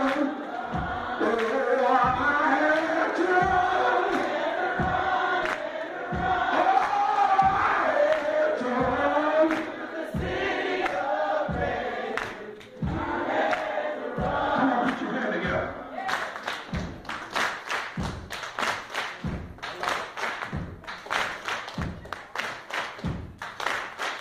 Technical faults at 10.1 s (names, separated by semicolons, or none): none